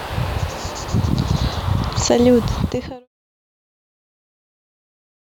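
No technical faults can be heard in this speech recording. Room noise sits about 26 dB below the speech, and the level fades out smoothly from around 2.5 s, reaching silence at 3.08 s with no click or hard edge.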